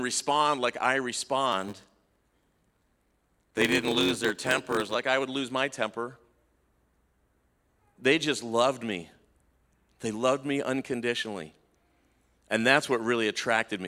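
From 1.52 s to 4.96 s there is a block size mismatch, padded. Short blocks are zero-filled, giving a 93.8 Hz buzz, which fits a 512-sample read. Speech runs at 0.861 speed, timbre unchanged.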